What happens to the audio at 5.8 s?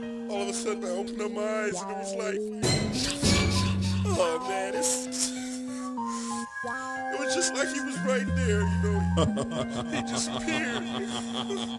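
At 5.8 s you're still inside a wrong sample rate stretch running from 2.37 to 5.98 s. The audio is played faster than it was captured, with no conversion, so everything runs about 1.09 times fast and sits roughly 1.5 semitones sharp. That fits 22 kHz material played back at 24 kHz.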